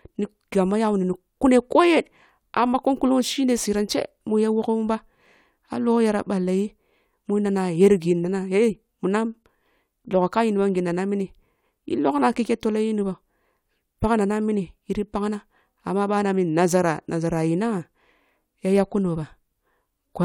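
No technical faults can be heard anywhere in this speech.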